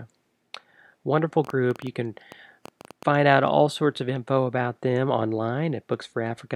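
From 1.4 to 3.0 s, just before "find out all sorts", a train of clicks ticks unevenly, about eight per second, likely from electrical interference. Unlike random crackle, the clicks share one shape and reach roughly speech level.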